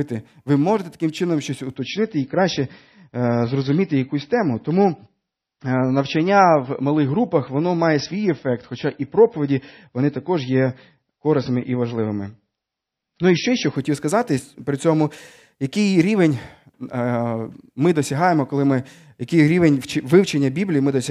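From 1.76 s, after "можете таким чином щось", to 13.76 s, before "сказати при цьому який", the adaptive stream falls to a lower bitrate. Speech loses everything above 5.9 kHz and turns swirly, switching abruptly with no gap.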